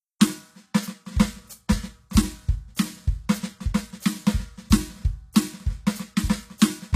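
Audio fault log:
Throughout, likely HE-AAC compression: the music's treble sounds synthetic, with cymbal-like and sibilant detail turning gritty and metallic, and nothing above 14.9 kHz. Unlike a plain low-pass, the top band is rebuilt from lower frequencies, which fits a low bitrate around 24 kbps.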